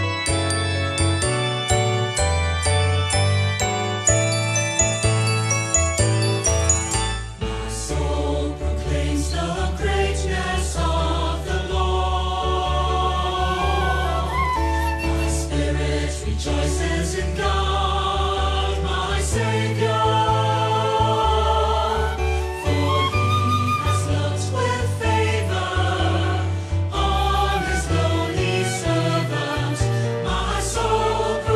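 Nothing stood out as a technical problem on listening.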